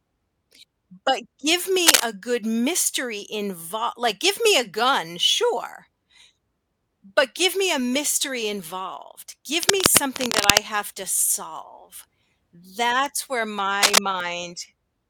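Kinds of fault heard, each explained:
Cable scratch noise: uneven rustling bursts over the speech near 1.9 s, from 9.6 to 10.6 s and near 13.8 s, likely from a worn cable or connector moving.
Bit error spike: lone sharp ticks at 9.83, 13.06 and 14.20 s, where one to three samples jump to about -13 to -19 dBFS and drop straight back.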